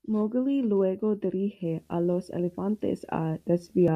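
From 1.65 s to 3.89 s a video or display buzz sits under the speech: a screen or its cable is coupling interference into the audio path, giving a 75 Hz buzz at the picture's field rate with a gritty hash above it, far quieter than the speech, around 40 dB down. A spectrogram shows a ladder of horizontal lines at 75 Hz and its harmonics across that span, and the waveform's quiet gaps carry a steady, periodic fuzz instead of silence.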